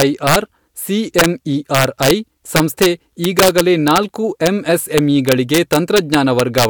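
Integer overflow runs through the whole speech clip. The level is pushed about 6 dB past the integer limit, and a small fraction of the loudest peaks wrap around to the opposite sign. Clipping would just flatten those peaks. Here they produce violent, sharp cracks on the strongest syllables.

At 3.24 s a sharp snap sits on top of the speech. It is most likely an electrical switching spike, picked up by the audio line from a nearby switch or discharge. Unlike the overflow cracks, it is tied to an outside event rather than to loud peaks, and it is heard once.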